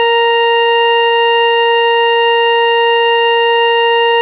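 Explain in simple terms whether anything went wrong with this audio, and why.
Nothing went wrong; the music came through a normal call.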